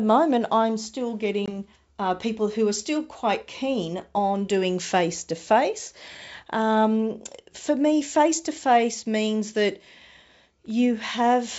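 At 1.46 to 1.53 s, between "moment I'm still" and "uh people who are", there is packet loss on an ADPCM call. What sounds like a single packet, about 20 ms of audio, goes missing and is replaced by silence. The receiving decoder's adaptive predictor and step size then no longer match the sender's. The result is an abrupt hard-edged gap, followed by speech resuming with brief distortion before it settles. The surrounding G.722 wideband audio stays clear up to about 7 kHz, which fits the full 64 kbit/s mode.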